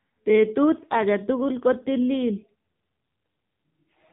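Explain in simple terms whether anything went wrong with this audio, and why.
The speech sounds thin, muffled and buzzy throughout, with a robotic edge, like a poor mobile call. The cause is the AMR narrowband mobile codec, squeezed hard: it drops everything above 3.8 kHz and rebuilds the voice roughly from a simple model.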